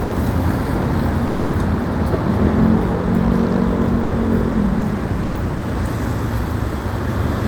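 An everyday sound recording with six brief dropouts, at 0.03–0.11, 1.27–1.53, 4.03–4.11, 4.79–4.81, 5.23–5.35 and 5.57–5.61 s. Each gap lasts 20 to 260 ms and is filled with comfort noise. This is likely sound dropped by the voice detector, consistent with Opus DTX.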